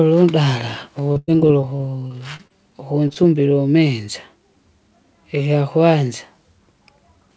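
From 1.12 to 2.52 s the speech breaks up with repeated packet loss, giving a robotic sound. Nine holes open in this stretch, about 0.3 s in all. The longest lasts 96 ms. Each gap is patched by stretching the last sound forward, so about a fifth of the span is synthetic fill. The holes come close together. The speech turns choppy, with pieces missing.

Two short concealed packet losses follow, at 3.08 to 3.11 s and 3.13 to 3.17 s. Each drops about 20 ms before it reaches the decoder. The receiver fills the hole from the preceding sound and then blends back into the real signal. Each one is heard as a brief smear or wobble. A short consonant there can disappear. Throughout, nothing sounds above 8 kHz, which fits a G.722 call codec at 64 kbps.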